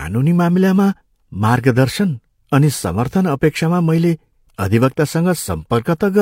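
No technical faults can be heard anywhere in the recording.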